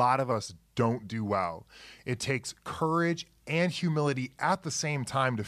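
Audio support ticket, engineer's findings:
Wrong sample rate, 0.31 s to end of clip. Speech slow and low from that point. Speed 0.919x, pitch down 1.47 semitones, locked together. Samples replayed at a lower rate than they were captured at, with no conversion step. The ratio fits 48 kHz material clocked out at 44.1 kHz. Probable component: playback path running at the wrong rate with no conversion.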